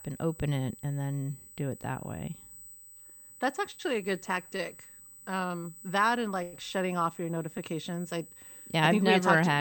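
From start to finish a thin, steady whine sits at 8 kHz beneath the speech, roughly 20 dB below it. This is USB whine: the bus draws current in bursts every 125 microseconds, and that ripple leaks into the audio through shared power or ground, giving a tone of fixed pitch. On a spectrogram it is a straight, unbroken horizontal line at 8 kHz across the whole clip, unaffected by the speech around it.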